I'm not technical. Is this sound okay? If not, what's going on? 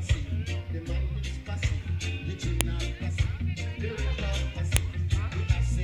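No. There are two sharp clicks, at 2.61 and 4.77 seconds. This is a file header played as audio. The sound was joined from separate pieces, and each piece's short start-of-file data was played as sound instead of being removed.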